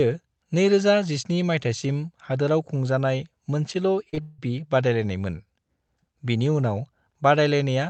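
A short stretch of speech, heard through a call path whose band-limited sound tops out around 8 kHz, fitting Opus at a modest bitrate near 24 kbps, is marred just past the four-second mark. From 4.09 to 4.15 s, and again from 4.15 to 4.19 s, the sound smears and wobbles briefly: two back-to-back cases of short concealed packet loss, where about 40 ms and then 20 ms of audio failed to arrive in time and the decoder stretched the preceding sound to cover each gap before blending back into the real signal. Almost immediately after, from 4.21 to 4.40 s, the audio turns into a continued, fading buzz-like extension of what came before rather than real speech, lasting nearly the whole 0.19 s before normal audio resumes with that portion simply gone. This is likely a long network dropout, with the receiver's concealment filling the entire gap instead of falling to silence.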